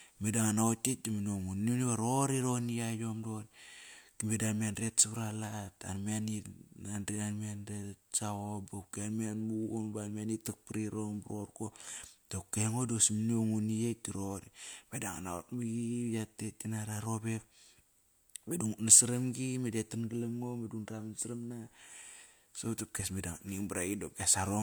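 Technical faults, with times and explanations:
No technical faults heard anywhere in the speech recording; nothing to log.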